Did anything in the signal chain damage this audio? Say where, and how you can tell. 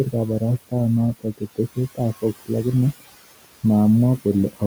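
Yes, the damage sits in the call processing stage, where a noise suppressor is working on the speech. Across the whole clip you can hear its artifacts: the room noise drops by about 16 dB in the gaps and comes back up under the talking, because the gain is being reset frame by frame on each band it judges to be steady noise. The room noise itself, about 19 dB below the speech, is just the room.

That same suppressor also gets it wrong in two spots, giving speech cut by the noise suppressor. Between 1.14 and 1.78 s, roughly a fifth of a second of speech gets pulled down, by about 18 dB at worst, and again between 2.22 and 2.51 s for around a tenth of a second. Those bits sound swallowed or faint, which is what happens when quiet speech energy looks enough like the noise floor that the suppressor turns it down along with the background.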